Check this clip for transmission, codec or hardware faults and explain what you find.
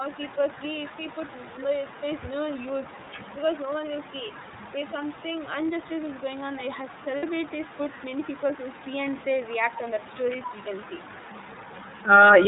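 Three faults run through this speech clip: an uncancelled echo, iLBC coding, and a brief concealed packet loss.

Echo with no canceller, throughout: the far end's loudspeaker feeds its microphone with nothing removing it, so each phrase returns about a fifth of a second later, roughly 21 dB down and thin.

iLBC codec, throughout: narrowband coding of each frame's excitation cuts everything above 4 kHz and leaves the speech plainly rough and slightly synthetic, which fits the 13.33 kbps mode with 30 ms frames.

Lost iLBC frames, 7.17 to 7.24 s: packets went missing and the decoder repeated the last pitch cycle mixed with noise, giving 60 ms of held, faintly buzzy vowel, consistent with two 30 ms frames, before the speech recovers almost immediately.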